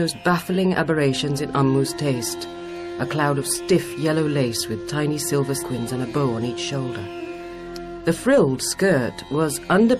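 At 5.61 to 5.63 s, damaged data in the compressed stream makes the decoder misread frames, lose sync and hunt for the next header, giving a brief chirp, squawk, click or short hole. A spectrogram shows a narrow garbled vertical block; the waveform breaks abruptly there.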